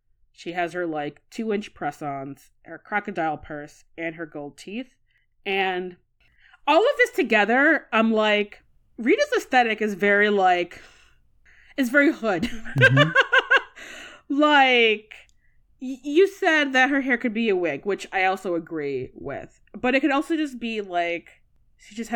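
At 12.57 s, just after "is very hood", CD scratch ticks begin and run until 12.99 s. Three short ticks land in that span, evenly spaced about a fifth of a second apart. Each is tiny, the longest lasting around a millisecond. A blemish on the disc wiped out more data than error correction could rebuild, once per revolution. The player patched the gap each time, leaving a regular click in the speech.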